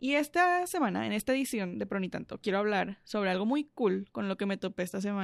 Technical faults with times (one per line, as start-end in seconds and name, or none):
none